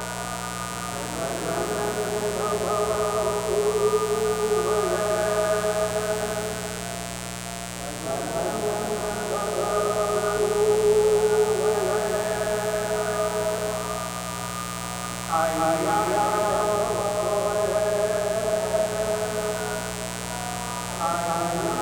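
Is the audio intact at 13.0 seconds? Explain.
No. At 13.0 seconds, as through the whole clip, a mains buzz sits under the sound: sharp spikes at twice the 60 Hz mains rate, with harmonics up into several kHz, at roughly 10 dB below the signal. Its raspy, steady edge sets it apart from a smooth, pure mains hum.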